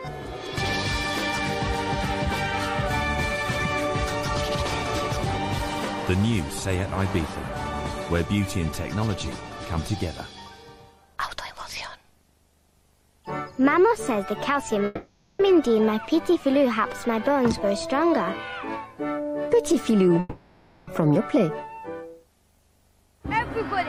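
At 14.85 s the sound gives way to a smeared, buzzy continuation of itself that trails off until 15.41 s, and the same thing happens again from 20.19 to 20.89 s. Both are likely a long network dropout: packets stopped arriving for roughly half a second and then close to 0.7 s, and the receiver stretched the last audio it had to cover the gap. When the audio returns, the missing stretch is simply gone.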